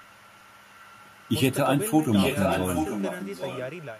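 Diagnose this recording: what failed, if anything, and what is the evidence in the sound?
Call processing, echo leak. A delayed copy of the speech trails it by 816 ms. It is faint from 0.01 to 1.34 s, then nearly as loud as the original from 2.11 to 4.00 s. The likely cause is a far-end echo canceller passing loudspeaker pickup back down the line.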